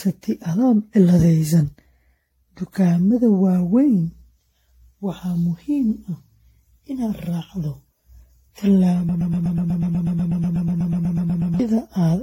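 From the start the speech has that swirly, hollow, smeared quality of generation loss, more than a single encode would leave. It's likely been through an AAC-style codec at roughly 64 kbit/s around seven times, each pass adding noise and holes, with nothing above 16.6 kHz.

Then from 9.09 to about 11.60 s a broken-record loop kicks in: a 0.12 s scrap repeats back to back, about 20 times, so whatever should have played there is lost. Most likely the player or stream stalled and kept resending its last fragment.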